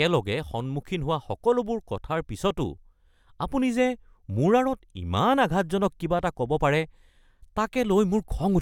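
No technical faults can be heard anywhere in this speech recording. There is nothing in the audio that calls for a time or an explanation of a problem.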